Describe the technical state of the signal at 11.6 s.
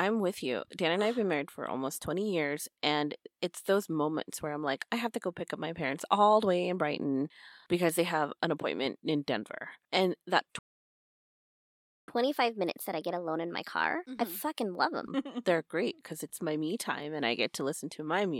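At 11.6 s the output is silent, partway through a playback stall that runs from 10.59 s to 12.08 s, roughly 1.5 s in all. The speech stops abruptly mid-flow and then resumes, most likely because the player ran short of data or its thread was blocked. On a waveform the trace drops to a flat line across that span, and a spectrogram shows a clean, empty vertical band with sharp edges.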